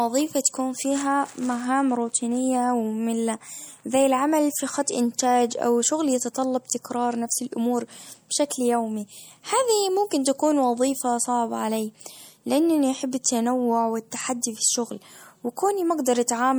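Throughout, the speech sounds watery and swirly, with dull treble and chirpy s sounds. This is likely MP3 compression, fitting a low bitrate near 64 kbps.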